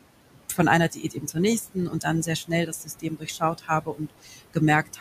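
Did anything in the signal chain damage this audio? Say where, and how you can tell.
Yes. The damage happens in call processing, where a noise suppressor pulls down every band it judges to be steady noise, cutting the room noise, which sits about 14 dB below the speech, by about 21 dB. The gain is recalculated frame by frame, so the residual background sinks in the gaps and swells back under the speech throughout the 5-second clip.

The same suppressor also mistakes parts of the speech for noise and turns them down with the background. This happens after "von einer" from 0.9 to 1.36 s, by about 13 dB; from 1.74 to 2.06 s, just before "dann sehr", by about 14 dB; after "dann sehr" from 2.47 to 3.42 s and again from 3.58 to 4.56 s, both by about 20 dB; and from 4.86 to 5.0 s, by about 15 dB. In each span, between about 100 and 500 ms of speech sounds swallowed or faint.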